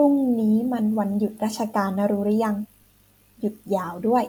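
No technical faults can be heard in this recording. At no point in the speech does anything mark a place where the signal went wrong.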